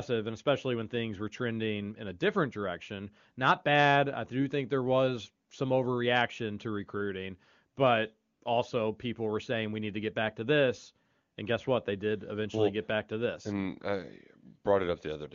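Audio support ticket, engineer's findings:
AMR comfort noise, 8.33 to 8.41 s, between "overreaction to recruiting but" and "also people were saying". 80 ms gap: sender stopped speech frames, receiver filled it with smooth synthetic noise replacing the real background. Wideband coding around it is clean, fitting a high AMR-WB rate.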